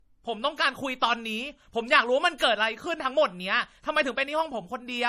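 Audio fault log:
Throughout: low-bitrate audio saved at a high bitrate. The speech has nothing above 14.9 kHz and carries the smeared, swirly coding artefacts of a heavily compressed MP3, which fits an encode at around 40 kbit/s. The file itself is a high-bitrate MP3, which points to something like 275 kbit/s, yet it sounds no better. The likely cause is a re-encode of that low-bitrate file. The second pass cannot restore the band and detail the first discarded, so the cut-off and artefacts remain.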